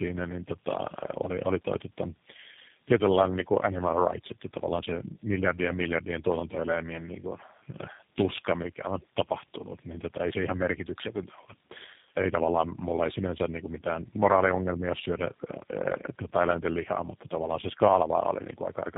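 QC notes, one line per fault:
Throughout: tandem speech coding. The speech passes through three low-rate speech coders in a row, consistent with an AMR-NB, GSM full rate and G.729A chain. Each re-codes the previous coder's errors, so it sounds rough, muffled and warbly. A spectrogram shows nothing above 3.7 kHz and smeared, wavering harmonics.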